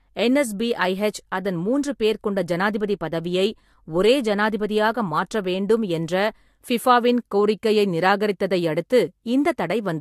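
Throughout the speech, nothing sounds above 14.3 kHz, and two different kinds of compression smearing overlap, unlike one codec's single signature. The likely cause is transcoding between lossy codecs.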